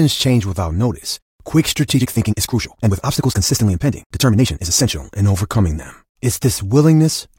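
After "change without notice quick", 1.92 to 4.9 s turns rushed at 1.75 times speed, pitch held: a time-stretched section, likely squeezed to fit.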